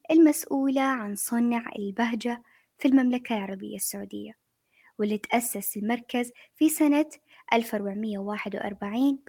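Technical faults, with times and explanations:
No technical faults can be heard in this clip, so there are no times or explanations to give.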